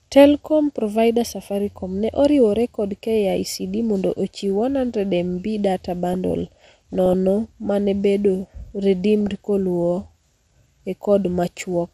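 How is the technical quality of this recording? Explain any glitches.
The technical quality is poor. Dull, granular coding damage runs through the whole recording, and two short bursts of burbling sit on top of it.

MP2 compression is audible throughout the speech. The top end is dull, and a gurgling, grainy texture clings to the speech. The likely cause is MPEG Layer II coding at a low bitrate, which fits about 80 kbps. With so few bits, the encoder shuts off upper sub-bands and quantises the remaining ones coarsely, so the high bands flicker in and out. This differs from MP3 damage: instead of swirly, metallic pre-echo, the sound is band-limited and grainy, the way low-rate digital radio sounds.

DAB burbling appears from 6.13 to 7.14 s and again, more briefly, from 9.21 to 9.29 s. It sounds like blips of noise in narrow bands thrown over the speech. Bit errors from weak reception, at a rate of a fraction of a percent, got past error correction into the MP2 data. 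Corrupted samples then put short blips of noise in single sub-bands. A dropout or packet loss would leave gaps or repeats, but here the sound keeps running and bubbles with wrong energy in narrow bands.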